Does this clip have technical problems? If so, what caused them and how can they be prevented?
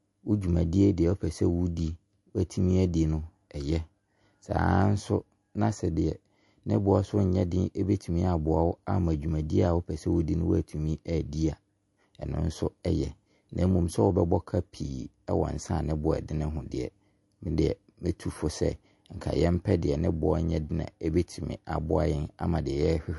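Yes. Throughout the speech there is plainly audible compression damage, most likely from MP3 compression at a low bitrate, with a sound that fits roughly 48 kbps. Nothing is present above 11.3 kHz, because the encoder cut the treble to save bits. Weak frequency components drop in and out between frames, giving a watery, swirly texture with metallic chirps on s sounds and smeared consonant attacks. To prevent this, keep an uncompressed master and encode at a higher bitrate, or use a more efficient codec.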